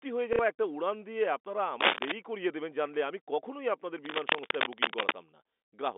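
At 0.33 s the speech briefly turns to a robotic stutter lasting about 60 ms, ending at 0.39 s. This is packet loss with the last packet repeated. The receiver replayed the final good audio chunk until fresh data arrived. The sound points to two lost packets of about 30 ms each. Because the repeated piece doesn't match the pitch cycle, the loop gives a brief buzz at roughly 33 Hz.

From 1.81 to 2.12 s a dense, uneven scratching and rustling runs over the speech, a little louder than the speech itself. A longer stretch of the same noise follows from 4.01 to 5.15 s, at about the same level as the speech. This is cable scratch noise, likely from a worn cable, connector or control being moved. That movement makes the contact resistance jump rapidly and inject irregular noise bursts. Under all of this, the telephone-band G.711 line carries the sound within roughly 250 Hz to 3.6 kHz.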